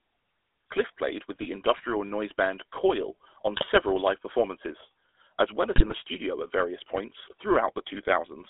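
From start to finish the speech runs through the GSM full-rate codec, and the damage is plain. The band sits between about 300 Hz and 3.6 kHz, and there's that gravelly, buzzy edge you get when the vocal tract is rebuilt from a sparse, regularly spaced pulse excitation. It's what you'd expect from a 13 kbps full-rate stream: the coarse excitation leaves a grainy texture on every voiced sound.

On top of that there are three short bursts of GSM bit errors. The first runs from 1.32 to 1.46 s, just before "industrial noise band". The second is from 3.56 to 3.67 s, ending at "live performances as well". The third, at 5.76 to 5.93 s, falls between "performances as well as" and "studio at various points" and is the worst of the three. Corrupted filter, pitch and gain values warp the spectrum and jolt the level, so each burst breaks into squawky, gargling pops.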